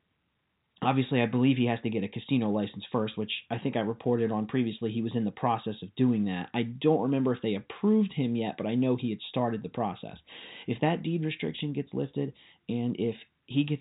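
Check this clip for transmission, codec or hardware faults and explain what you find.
No faults detected here.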